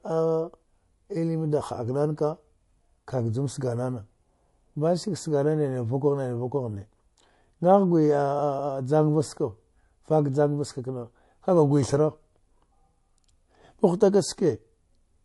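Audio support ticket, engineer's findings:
Speech, full clip: plainly audible watery, swirly texture with a hard treble cutoff at 11.3 kHz. Likely MP3 compression at a rate pointing to roughly 49 kbps. The bit-starved encoder drops upper bands and toggles weak frequency lines frame to frame.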